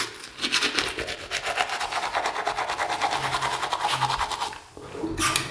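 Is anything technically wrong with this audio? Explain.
No, nothing is technically wrong with this audio.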